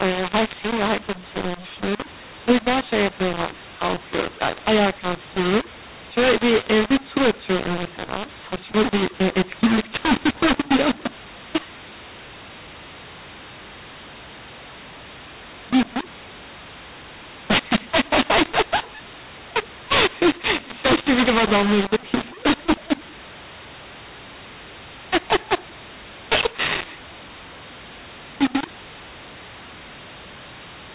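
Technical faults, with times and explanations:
Throughout, mu-law and A-law mixed up: the speech sounds harsh and gritty, levels jump unevenly, and pauses fill with hiss. The G.711 telephone audio was coded as mu-law but decoded as A-law, so each 8-bit code lands on the wrong level and near-silent samples are lifted well above silence.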